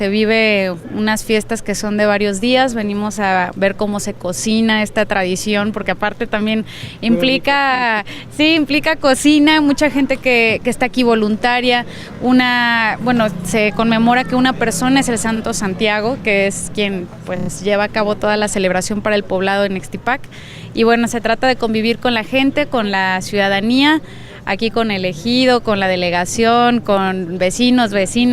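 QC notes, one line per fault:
7.75–7.82 s, 15.36–15.40 s, 17.36–17.49 s, 24.16–24.24 s: repeated frames. Short stutters where a 30 or 40 ms block replays one to four extra times; the same coded frames were played again, adding 40 to 120 ms each time.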